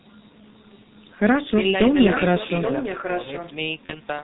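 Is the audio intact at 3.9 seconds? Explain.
No. From about 3.86 to 4.01 s there's VoIP packet loss concealed by the speech codec. One 30 ms frame went missing, and the decoder filled the gap by repeating its last pitch and filter settings while turning the gain down. What you hear is the sound smearing into a buzzy tone or a coloured noise that fades. Because each frame builds on the one before it, the sound stays thin and warped for a while after the data comes back.

That moment also carries the G.723.1 codec damage, which runs through the whole clip at about 6.3 kbit/s and is heavy here. With 30 ms frames and nothing above 4 kHz, the speech comes across muffled and hoarse, and the consonants blur because the codec's model of the voice updates so slowly. The missing band above 4 kHz is the codec's doing, since the call's mic processing only takes out the lowest bass.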